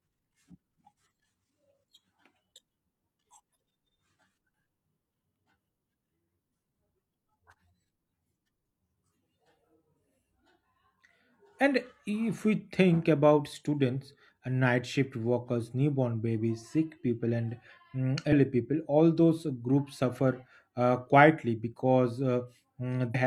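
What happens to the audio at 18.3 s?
At 18.28 to 18.33 s, just after "sick people and mm" and before "people all those groups", there is damaged data in a compressed stream. Corrupted bytes in the encoded speech make the decoder misread a frame, lose sync and hunt for the next valid header, heard as a brief chirp, squawk, click or short hole. The disruption lasts about 44 ms.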